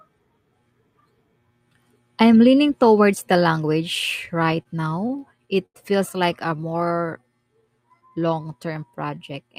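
Repeated stalls (stutter) run from 4.25 to 5.76 s in this speech clip, between "leaning towards the language" and "feels like". Packets kept arriving late, so the jitter buffer emptied over and over. Each gap was bridged by extending the last sound, about 220 ms in total, with the longest stall 87 ms. Nothing is lost, but the speech halts and drags. A jitter buffer slow-down follows from 6.47 to 9.49 s, just after "feels like". The receiver was refilling its reserve by repeating single pitch periods and slices of pauses, adding about 302 ms. The speech plays at 90% speed with unchanged pitch, so sounds are drawn out.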